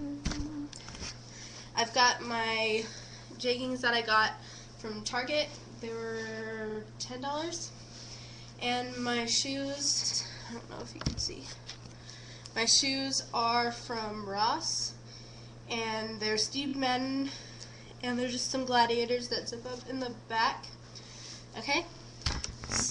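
At 10.03 s there's a repeated-frames stutter: a 92.9 ms chunk plays twice more, adding 0.19 s, which fits a four-frame block resent. At 16.67 s a shorter 23.2 ms piece, likely one frame, repeats twice.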